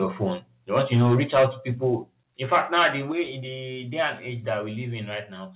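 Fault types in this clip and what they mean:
Microphone overload: From 0.76 to 1.45 s and again from 2.52 to 2.87 s the loudest syllables turn harsh and crackly, with peaks about 9 dB and about 8 dB beyond the converter's limit. The likely cause is an input level set too high, so the converter shaves the tops off roughly a tenth, then a twentieth, of the samples. On a waveform the peaks are flattened. A spectrogram shows smeared vertical streaks of distortion filling the band up to its 4 kHz ceiling.
Microphone volume stepped down: Speech and background drop abruptly together, by about 2 dB at 1.03 s, about 3 dB at 2.04 s and about 5 dB at 3.12 s, just before "in the day and". The first step lands during a distorted stretch and the last shortly after one, which points to software reacting to a hot input and likely cutting the device's gain. On a waveform the envelope steps down as a sudden change of height. 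A spectrogram shows everything dimming at once across the narrowband range.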